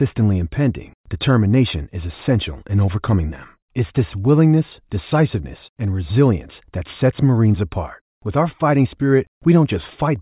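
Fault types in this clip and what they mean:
No technical faults are audible.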